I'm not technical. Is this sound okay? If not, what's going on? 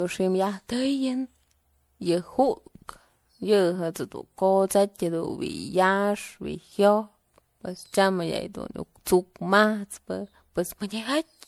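No. Throughout the speech there is generation loss: it sounds swirly, smeared and hollow, with the starts of sounds blurred. This is likely from being saved as MP3 about seven times over, each re-save adding fresh damage on top of the last.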